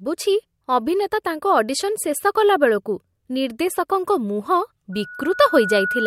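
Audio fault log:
4.92–6.07 s, loudspeaker feedback squeal: a steady 1.5 kHz tone swells over about a second until it is roughly as loud as the speech, and it runs to the end. The microphone is hearing its own loudspeaker, and at that frequency the loop gain exceeds one.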